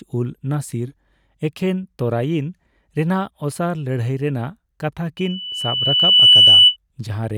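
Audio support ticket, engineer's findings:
Loudspeaker feedback squeal, 5.17 to 6.77 s. Single 3 kHz tone swelling over about a second to roughly 15 dB above the speech. Mic picking up its own loudspeaker; loop gain above unity at 3 kHz, so that frequency self-reinforces.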